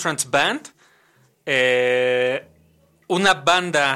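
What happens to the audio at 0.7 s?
Nothing goes wrong at 0.7 s; the speech passes through that moment intact, with no dropout, click, distortion or other audible fault.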